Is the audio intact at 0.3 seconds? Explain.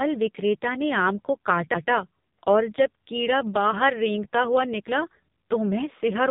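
No. At 0.3 s the speech sounds buzzy, synthetic and muffled, with nothing above 3.8 kHz: heavy AMR narrowband mobile codec damage throughout, pointing to a very low bitrate near 6 kbps.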